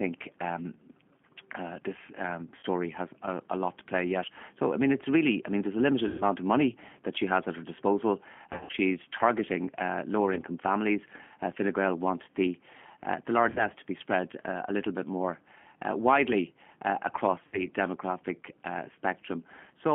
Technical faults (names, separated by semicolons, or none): G.729 codec; VoIP packet loss concealed by the speech codec